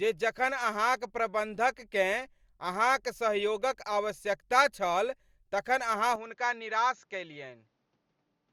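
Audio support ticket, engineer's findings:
Speech turns dull and narrower from 6.16 s to end of clip, right after "आवश्यकता छल तखन अहाँ". Nothing above 7.2 kHz from that point. No gap at the transition, level roughly unchanged, faint new background noise far below the speech. Likely cause: input switched to a poorer device mid-recording, e.g. a second mic or headset call profile with reduced bandwidth, its own tonal colour and noise floor.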